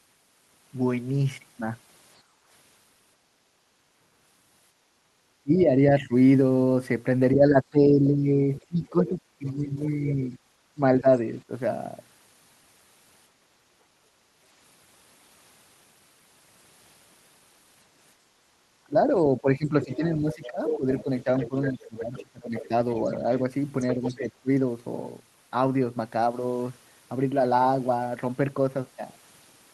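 A speech recording with three echo-canceller faults. Background gated by the echo canceller at 2.22–5.15 s, 13.31–14.4 s and 18.16–18.54 s: the room sound ducks by about 9, 7 and 6 dB while the far end plays. Speech suppressed in double talk at 5.43–11.51 s and 18.86–24.5 s: the talker dips by up to roughly 15 dB, likely because the canceller attenuated everything during overlapping talk. The other side's voice leaks through at 8.57–9.5 s and 19.82–24.18 s, around 20 dB and 10 dB below the talker, likely as loudspeaker echo the canceller failed to remove.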